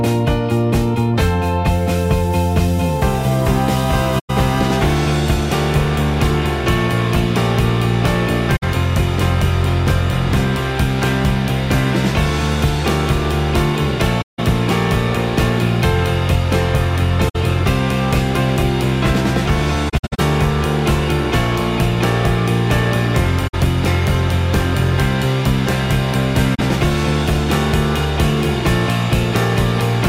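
Soft-edged holes open in the sound at 4.19 s (about 107 ms), 8.56 s (64 ms), 14.21 s (171 ms), 17.29 s (64 ms), 19.89 s (213 ms of gaps broken up across 299 ms, the longest about 70 ms), 23.47 s (64 ms) and 26.54 s (43 ms). The sound fades out and back in. This is AAC frame loss with muting. Lost frames were decoded as silence, and the overlapping windows smooth the edges. Gaps in steps of about 21 ms fit 1024-sample frames at 48 kHz.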